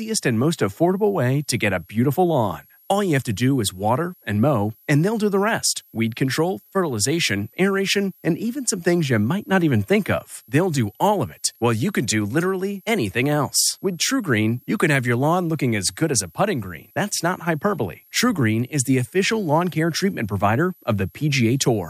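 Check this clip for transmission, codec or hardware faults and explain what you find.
One hardware fault is present: a switching supply whistle that runs under the speech for the whole clip.

A thin, high whistle sits well below the speech, roughly 35 dB down. Its pitch wanders between about 11.4 and 12.0 kHz. A switching power supply is dropping into an audible burst mode, or beating against a second supply, and the tone leaks into the audio path. Its frequency shifts as the supply's load changes, so the whistle drifts.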